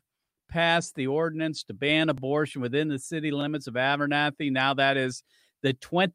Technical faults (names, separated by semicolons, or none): repeated buffer